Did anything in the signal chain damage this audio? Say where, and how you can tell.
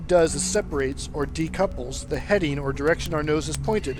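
Yes. From 0.13 s to 3.97 s a steady train of sharp ticks, some seventy of them at roughly 70 ms intervals, runs under the audio. These are word clock ticks from an unlocked digital link: the receiver's clock drifts a few hundred ppm from the sender's, dropping or repeating one sample at each slip.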